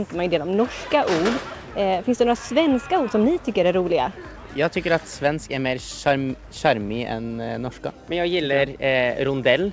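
No technical faults are audible.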